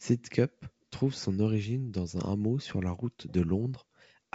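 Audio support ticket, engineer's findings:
No faults found; G.722 wideband path, nothing to report.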